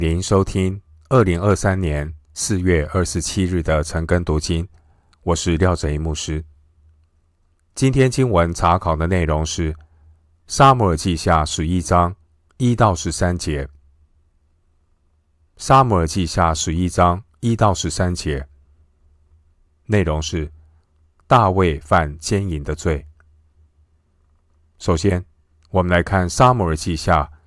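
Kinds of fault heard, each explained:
Nothing here stands out as a technical fault; the speech comes across steady and intact all the way along.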